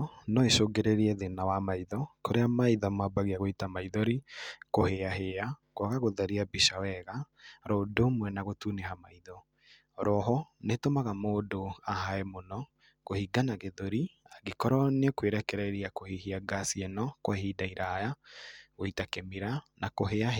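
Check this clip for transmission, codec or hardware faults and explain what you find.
No transmission, codec or hardware faults turn up in this speech clip.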